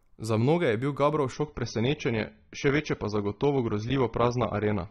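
An adaptive stream at a lower bitrate takes over this speech clip at 1.32 s and holds to the end. The stream switched down to a cheaper encoding when the connection slowed, so the quality changes abruptly with no gap. From that point nothing survives above about 6.3 kHz, the treble turns dull, and coding artefacts rise. That fits a drop from roughly 96 kbit/s AAC to around 24 kbit/s.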